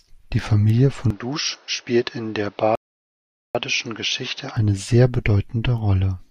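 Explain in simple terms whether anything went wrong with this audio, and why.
Input switched to a poorer device, from 1.10 to 4.57 seconds: the speech suddenly turns duller and quieter, with nothing above 6.3 kHz and a faint new background hiss, then clears again. This is likely the recording jumping to a weaker microphone or headset.

Rebuffering stall, from 2.75 to 3.55 seconds: the sound stops dead for 0.79 seconds, then picks up exactly where it left off. The player ran out of downloaded audio and waited for more, so nothing is missing, only delayed.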